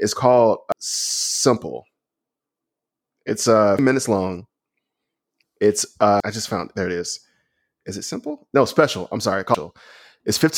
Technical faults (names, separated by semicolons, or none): damaged data in a compressed stream